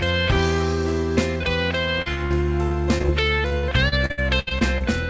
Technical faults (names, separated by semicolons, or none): short concealed packet loss; repeated packet loss (robotic sound)